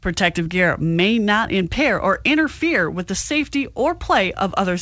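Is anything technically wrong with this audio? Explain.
Yes. From 0.44 to 0.47 s there is a short concealed packet loss: about 20 ms of audio arrived too late, and the receiver bridged the gap with synthetic continuation, leaving a brief smear.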